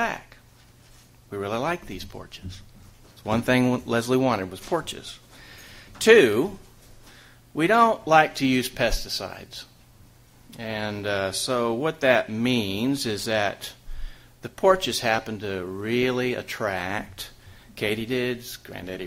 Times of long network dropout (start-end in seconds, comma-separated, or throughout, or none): none